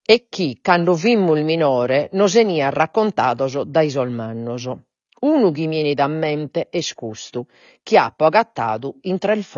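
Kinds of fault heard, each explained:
AAC compression: The speech is dull, with nothing above about 6.9 kHz, and has a smeared, warbling texture on sustained sounds and sibilants, likely from AAC-LC at a low bitrate near 24 kbps. A plain low-pass filter would not cause that smeared, warbling texture.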